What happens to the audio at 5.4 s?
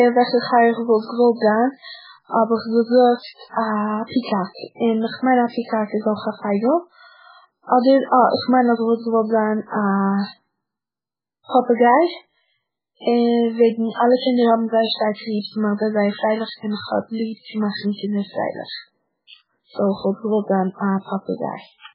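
At 5.4 s, as throughout, the speech likely went through heavy MP3 compression, which cut everything above 5.2 kHz and left it watery and swirly.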